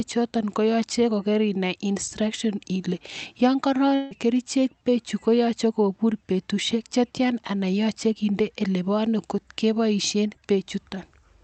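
From 3.95 to 4.14 s the speech turns into a fading, smeared buzz, and about 160 ms is gone when it returns. A long network dropout is the likely cause. The spectrogram shows a blurred, decaying band under the call codec's 8 kHz ceiling, and the waveform envelope shrinks without reaching silence.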